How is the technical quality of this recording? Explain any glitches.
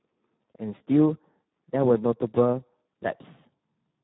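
Poor. The speech carries heavy Speex codec damage throughout. Its low setting, which fits about 8 kbps, leaves the CELP coder few bits for the excitation. The result sounds hoarse and noisy. Nothing reaches above 3.9 kHz, so it sounds narrow and dull.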